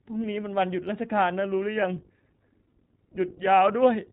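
From start to finish the speech carries the sound of the iLBC codec, a narrowband VoIP coder. Nothing is present above 4 kHz, so sibilants and consonant edges sound dull and boxed in. Each short frame's excitation is coded independently of the one before, and the damage is plainly audible: the speech sounds rough and slightly synthetic. The character fits the 20 ms framing and roughly 15 kbps mode of this codec.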